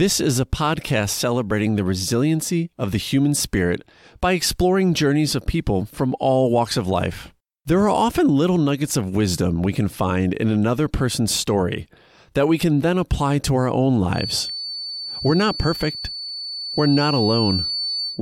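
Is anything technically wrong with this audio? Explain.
Yes. From 14.1 s to the end, a feedback whistle sits at 4.5 kHz, roughly 10 dB below the speech, likely from a loudspeaker-to-microphone loop held just at the edge of instability, swelling and fading slowly in level.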